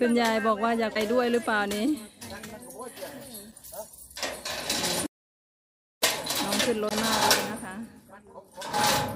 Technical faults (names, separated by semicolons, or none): damaged data in a compressed stream; audio dropout to silence